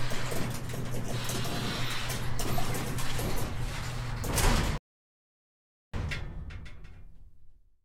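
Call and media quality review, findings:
Rebuffering stall, 4.78 to 5.94 s: player buffer ran dry, playback halted awaiting download. Sound drops to silence, resumes exactly where it stopped; nothing lost, about 1.16 s added.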